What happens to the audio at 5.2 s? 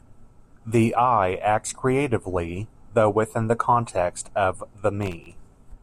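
A gritty burst of crackle tears across the speech from 5.02 to 5.32 s: processor overload crackle, as many sub-millisecond buffers miss their deadlines and replay stale audio with hard edges.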